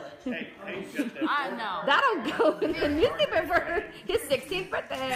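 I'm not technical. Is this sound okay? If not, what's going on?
No. From about 2.70 s to the end, there's a filter restarted on every block. The audio is processed in small chunks, and the filter forgets what it was doing between them, so each chunk starts from silence with a tiny click. Those clicks repeat 375 times a second, which fits chunks of 128 samples, and they merge into a steady buzz that gets louder and quieter along with the sound.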